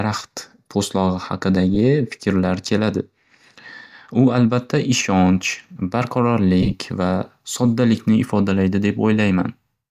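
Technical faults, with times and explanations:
1.75–1.77 s, lost LE Audio frames: about 15 ms of Bluetooth frames, which fits two 7.5 ms LC3 frames, went missing. The decoder repeated the last spectrum with scrambled signs, leaving a brief noisy smear just before "fikrlar keladi".
6.61–6.74 s, lost LE Audio frames: 67.5 ms of frames dropped in scattered gaps across 120 ms, which fits nine frames. The longest run was roughly 20 ms. Each gap was concealed with sign-randomised spectrum, so the sound turns grainy and smeared just before "va soddalikni ifodalaydi".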